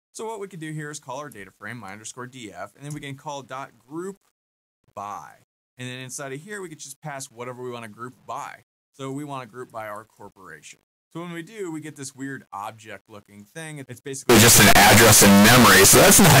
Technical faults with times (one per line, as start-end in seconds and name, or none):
14.29-16.40 signed and unsigned mixed up